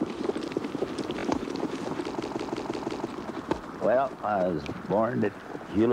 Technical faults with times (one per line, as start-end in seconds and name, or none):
1.19-1.25 Bluetooth stutter
2.22-3.07 system hang loop